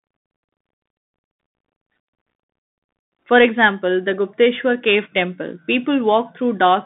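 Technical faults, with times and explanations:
Throughout, Bluetooth CVSD headset codec: one-bit delta coding, likely at 64 kbps, squeezes speech into roughly 150 Hz to 3.6 kHz, leaving muffled, granular-hissy sound with scratchy s sounds.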